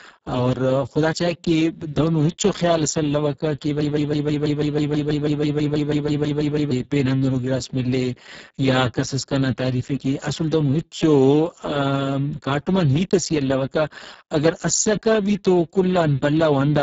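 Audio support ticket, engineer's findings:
Speex codec throughout: hoarse, noisy, robotic speech from heavy Speex damage, consistent with a very low bitrate near 6 kbps. Spectrogram: nothing above 7.7 kHz, smeared noise-like fill above 4 kHz.

Broken-record loop, 3.81–6.71 s: one 0.16 s fragment repeats back to back about 18 times, and the speech in that span is lost. The likely cause is a player or stream stall. Waveform: identical repeating blocks.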